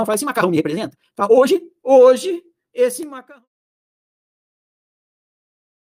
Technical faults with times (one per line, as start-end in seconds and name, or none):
0.00-1.60 time-stretched section